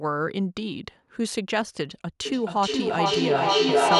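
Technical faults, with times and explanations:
2.25 s to the end: feedback echo between two devices. A second device in the same room is playing back what this mic sent, and the mic hears it again. Each echo canceller only removes its own device's playback, so nothing stops the loop. The sound comes back roughly every 0.4 s, thinner and more ringing each pass. The loop is hot enough that the repeats stack up instead of fading, peaking at about 6 dB above the speech.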